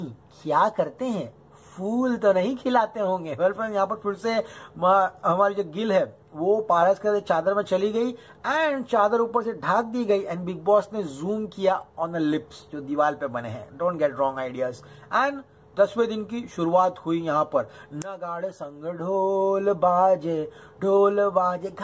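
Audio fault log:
No faults found in this clip.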